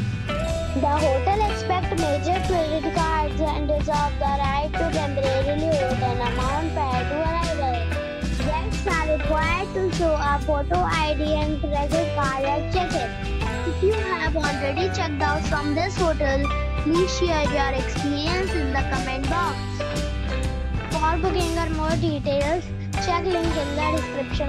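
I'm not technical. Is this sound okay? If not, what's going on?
Yes, nothing here sounds wrong, so there's nothing to worry about with this one.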